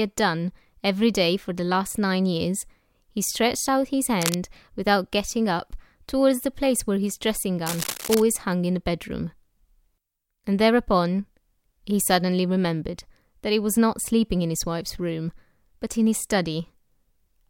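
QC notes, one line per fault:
4.19–4.35 s and 7.66–8.22 s, cable scratch noise: a worn cable or connector was likely being moved, making its contact resistance jump erratically. This lays dense, ragged crackle over the speech, first as a short burst nearly as loud as the speech, then as a longer stretch about 10 dB down.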